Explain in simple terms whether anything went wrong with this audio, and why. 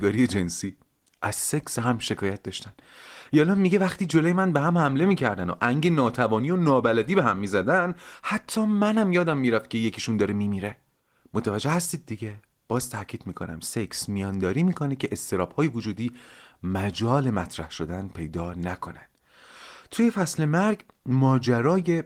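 Nothing went wrong here.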